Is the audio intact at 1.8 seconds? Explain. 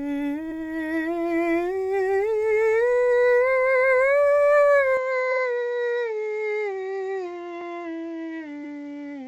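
Yes, the music plays through 1.8 s intact, with no audible fault at that moment.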